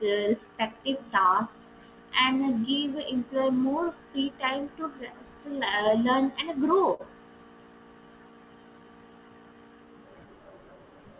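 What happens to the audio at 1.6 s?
Around 1.6 s the audio falls inside a cluster of scattered short gaps running from about 1.02 to 2.28 s. About three brief packet losses occur here, the longest roughly 10 ms, and the receiver hides each by extending the preceding sound, about 20 ms in total. Each gap is heard as a brief tick or a tiny smear in the speech. On a waveform it appears as a short stretch of repeated cycles. On a spectrogram it shows as a thin vertical seam where the harmonics briefly freeze.

The moment also lies within repeated timing corrections that run from about 0.41 to 11.03 s. The receiver keeps inserting short repeated pieces so that playback runs at about 97% speed and gains roughly 300 ms over the span. These edits come as slight, unevenly spaced hiccups and a marginally dragging tempo. On the waveform they appear as small duplicated segments. On the spectrogram they show as barely stretched syllables with occasional discontinuities in the formant tracks.

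Behind both lies clock drift between sender and receiver, with the sender's clock running about 4% slow throughout. The receiver's jitter buffer keeps draining, so it must pad the stream over and over. This produces the recurring, irregular stretch-and-hiccup pattern instead of one isolated event. On a spectrogram that is already band-limited, with nothing above 4 kHz through the G.711 call path, this shows as small timing seams scattered across the whole clip.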